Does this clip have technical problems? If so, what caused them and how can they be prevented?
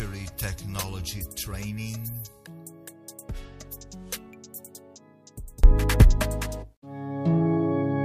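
Yes. From the start to about 5.64 s, the sound in mono drops by about 30 dB, leaving only a faint trace. Then it snaps back to full level for the remaining seconds. That collapse most likely comes from one channel inverted: with one side's polarity flipped, everything shared between left and right cancels when they're summed, and only the small differences survive. To prevent it, check polarity on every channel and run a quick mono fold-down before delivery.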